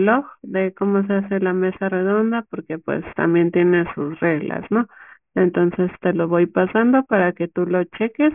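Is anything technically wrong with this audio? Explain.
Yes. Aliasing runs through the whole speech clip. Energy above a 3 kHz fold point was never filtered out, which fits a drop to about a 6 kHz sample rate, so it mirrors back as false tones some 25 dB down. Sibilants sound gritty and metallic, and a spectrogram shows energy packed hard against 3 kHz with reflected, unrelated streaks.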